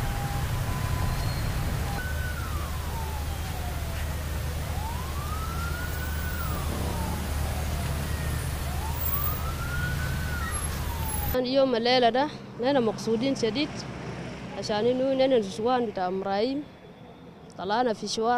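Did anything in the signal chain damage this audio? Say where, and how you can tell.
No, nothing along the chain seems to have damaged this one, so there's no stage to point at.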